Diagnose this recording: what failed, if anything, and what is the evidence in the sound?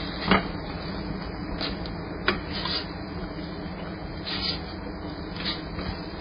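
Codec stage, and it runs the whole way through. Everything stops at 5 kHz and the sound carries the smeary, watery texture of a badly starved MP3. That's likely low-bitrate audio saved at a high bitrate; the bigger re-encode can't restore what the first pass threw away.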